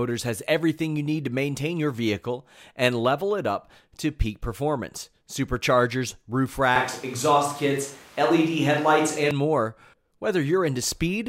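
A speech recording, and at 6.76 s, right after "peak performance superchargers roof", the sound abruptly turns roomy and hollow, losing its low end, then snaps back to its close, full character at 9.31 s. The loudness stays about the same, but room noise rises to around 30 dB below the speech. This is a switch to a distant microphone, likely a far-off or camera mic covering a gap where the close mic's signal dropped out.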